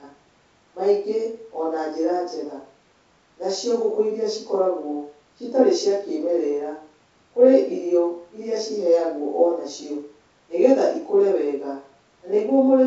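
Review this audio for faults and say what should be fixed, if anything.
Nothing stood out on listening to this speech, which carries the light upper-band hiss of G.722 wideband coding at 64 kbit/s, so there is nothing here that needs fixing.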